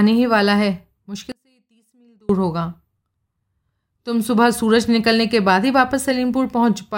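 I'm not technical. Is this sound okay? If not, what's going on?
No. From 1.32 to 2.29 s there's an audio dropout to a faint residue: the speech cuts abruptly to a very faint trace, likely a brief signal loss, not a natural pause.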